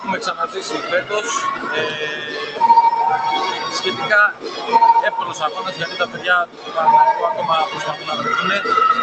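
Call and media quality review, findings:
Noise suppressor applied to music or sounds: level pumps by around 10 dB as a speech-tuned suppressor treats sustained content and tails as noise. The waveform envelope breathes, and the spectrogram shows sustains fading while onsets stay bright.

Sound cut by the noise suppressor: drops at 0.41–0.59 s (about 7 dB), 2.23–2.59 s (about 6 dB), 4.33–4.69 s (about 9 dB), 5.46–6.25 s (about 7 dB) and 6.46–6.77 s (about 10 dB). These show as envelope dips and faded bands on held or decaying material.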